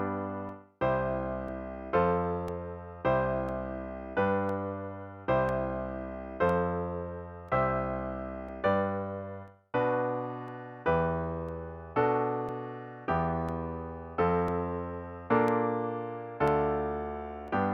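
Periodic USB or driver dropouts tick through the audio every 1.0 s, from 0.49 s to 17.48 s. Each gap is roughly 2 ms of silence, where the driver was briefly blocked.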